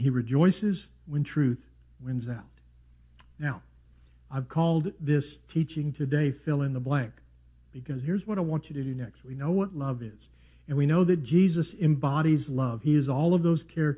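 No technical faults can be heard anywhere in this audio. Nothing in the sound calls for a time stamp or a closer look.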